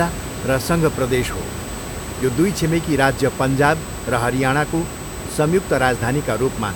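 A speech recording carries USB whine from start to finish: a steady, fixed-pitch tone at 8 kHz, roughly 20 dB below the speech. That frequency matches the 125-microsecond microframe rate of a USB bus, whose pulsed current draw is leaking into the audio path through shared power or ground. On a spectrogram it appears as a thin, unbroken horizontal line at 8 kHz across the whole clip, against the diffuse room noise that sits about 10 dB under the speech.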